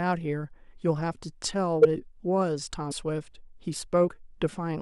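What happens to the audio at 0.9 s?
Nothing goes wrong at 0.9 s; the speech carries on intact through that moment.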